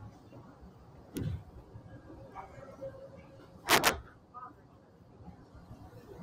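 From the start, a noise suppressor applied to these sounds treats steady tones and tails as noise, dipping them around 10 dB; the spectrogram shows held energy flickering away between attacks.

From 3.69 to 3.89 s, integer overflow: peaks pushed about 6 dB past full scale wrap to the opposite sign, giving violent cracks and waveform spikes jumping rail to rail.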